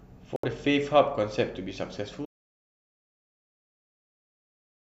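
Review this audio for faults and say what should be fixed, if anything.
At 0.36 s the speech cuts out and comes back at 0.44 s, a digital broadcast dropout. The receiver stopped getting frames it could decode, whether from signal loss or frames failing their checksum, and muted until clean frames returned. That hole is about 72 ms, which fits roughly three lost frames. Whatever was transmitted in that window is gone. A stronger receive signal or a re-capture from a cleaner feed would prevent it.

From 2.26 s to the end of the clip, the audio drops to silence with no room tone at all, an audio dropout to silence. Because the gap is silent rather than faded noise, the recorder kept writing after its input vanished, with the likely cause being a disconnected source, a broken link or an accidental mute. Everything after that point is missing, so the tail needs to be re-recorded. Checking cables and input metering throughout the take would catch this before it costs material.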